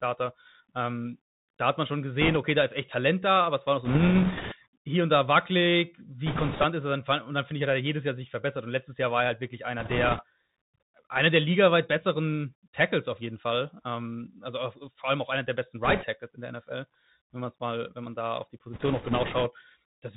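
A speech recording carried over a Bluetooth CVSD headset codec throughout, with the narrowband sound typical of a 64 kbps stream. Nothing above 4 kHz survives, s sounds are scratchy, loud high content distorts as the one-bit delta modulator's adaptive step fails to keep pace, and a granular hiss sits beneath the speech. Bit errors on a Bluetooth voice link add bursts of rushing, crackly noise at 2.21–2.37, 3.85–4.56, 6.26–6.64, 9.80–10.23, 15.85–16.05 and 18.73–19.51 s. The error rate is a few percent. Because each flipped bit moves the signal by only one step and the error decays, these bursts contain no sharp clicks.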